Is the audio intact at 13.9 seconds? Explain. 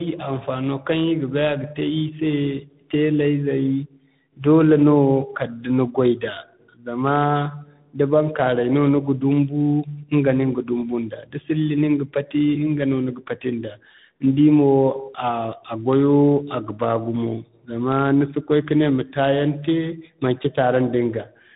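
No. At 13.9 seconds, as everywhere in the clip, the speech sounds rough, muffled and warbly, with nothing above 3.8 kHz. The cause is tandem speech coding: the call passed through AMR-NB at 10.2 kbit/s, then G.711 mu-law at 64 kbit/s, then G.726 at 32 kbit/s. That is two lossy speech coders in a row, so G.726 re-encoded audio that AMR-NB had already degraded, and their distortions added up.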